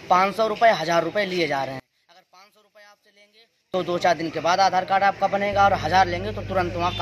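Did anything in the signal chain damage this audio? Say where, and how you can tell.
Yes. From 1.80 s to 3.74 s the sound collapses by about 33 dB, leaving only a faint residue before full level returns. That behaviour points to one channel inverted, most likely a polarity swap in the analogue wiring or a channel-handling stage, with the pair then summed to mono. Whatever both channels share cancels almost completely, so the centred content disappears and only the small left-right difference survives.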